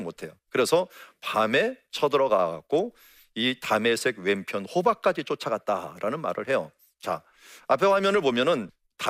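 No technical faults are audible.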